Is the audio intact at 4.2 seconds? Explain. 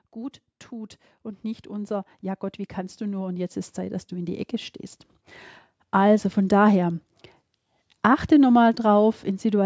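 No. An automatic gain rising fault runs from 0.14 to 4.62 s: the gain control judged the input too quiet and kept raising its gain, by about 12 dB over that span. At 4.2 s the speech and its background are still swelling louder together.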